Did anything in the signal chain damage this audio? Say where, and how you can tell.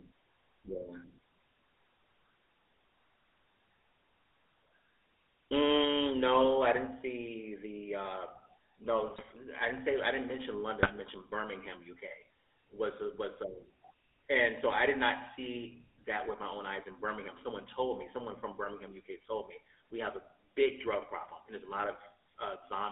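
Yes. The codec stage left a GSM full-rate codec signature across the whole clip. The speech has a buzzy, gravelly roughness and no content above about 3.6 kHz or below about 300 Hz, which fits a 13 kbps full-rate GSM path. That coder models the vocal tract and excites it with a sparse, regularly spaced pulse train built from only every third excitation sample. That coarse excitation is what gives the voice its plainly audible grainy edge.

GSM bit errors, a network-stage fault, break up the audio twice. The first runs from 9.04 to 9.29 s, ending just before "I didn't say I". The second runs from 10.83 to 10.99 s, starting right after "say I didn't mention". In both bursts the sound turns to squawks, pops and gargling. Corrupted bits reaching the decoder scramble the filter, pitch and gain parameters frame by frame, warping the spectrum and throwing the level around until clean frames resume.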